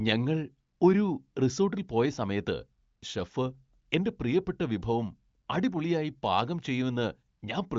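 No technical faults can be heard anywhere in the speech. It comes through an AMR wideband (HD Voice) codec whose band stops at about 7.4 kHz, and any coding roughness is at most faint, which points to the codec's top rate of 23.05 kbit/s.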